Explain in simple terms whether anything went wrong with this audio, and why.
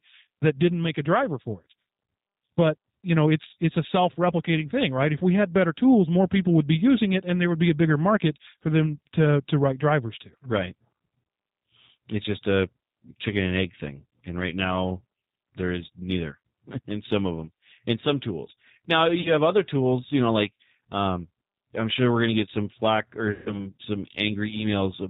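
The whole clip has gone through the G.729 codec, a phone-call codec that rebuilds speech from a simple model of the voice and throws away everything above 4 kHz. That's why the speech sounds muffled, a bit rough and slightly synthetic the whole way through.

There are also two spots of VoIP packet loss concealed by the speech codec. Around 19.21 to 19.32 s, just before "have other tools you", about 40 ms of audio went missing. Around 23.32 to 23.67 s, right after "get some flack or", about 140 ms was lost. In both gaps the decoder guessed by stretching out the last bit of sound it had, so you hear a brief buzzy or smeared tone that fades, and the speech stays weak or distorted for a moment afterwards.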